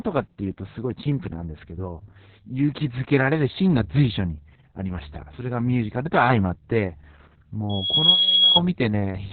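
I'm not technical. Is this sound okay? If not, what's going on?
No. Opus voice compression runs through the whole clip. The speech has been squeezed hard to save data, so almost everything above about 4.7 kHz is gone. That is why it sounds muffled, like an old telephone line. The coder also describes the voice's buzz only roughly, in chunks that fit 60-millisecond blocks, which leaves the speech hoarse and slightly robotic. The damage is heavy and lasts from start to finish.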